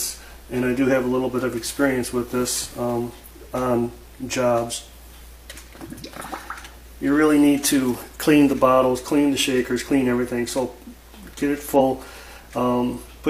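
At 11.75 to 11.80 s the audio lurches forward and a small slice of sound goes missing. This is compressed frames skipped: roughly one frame, about 50 ms of audio, was never played, which fits a frame length of about 46.4 ms.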